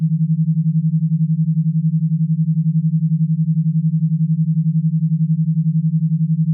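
Nothing is technically wrong with this audio.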